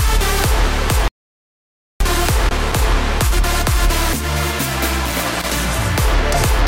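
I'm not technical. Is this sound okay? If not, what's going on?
No. From 1.08 to 2.00 s the sound cuts out completely, leaving just under a second of dead silence with no background hiss at all. This is an audio dropout to silence, likely caused by the input briefly disconnecting while recording carried on, so whatever happened then is lost.

There are also two short bursts of scratchy crackling, from 2.38 to 2.81 s and from 5.06 to 5.57 s. This is loose connector crackle: a worn or dirty plug or cable contact flickering on and off as it moves, chopping the sound into pops.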